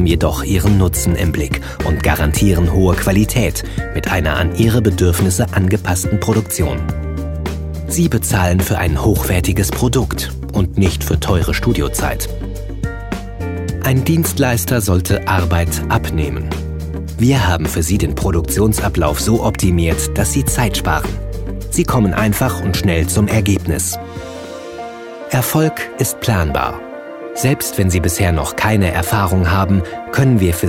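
No technical faults are audible anywhere in the recording.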